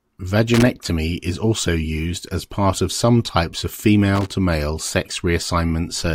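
At 0.54 to 0.67 s, just before "is also used as", and again at 4.15 to 4.30 s, after "of some types of", loose connector crackle breaks in: a worn contact intermittently opening the line, chopping the speech into irregular bursts of scratchy crackle.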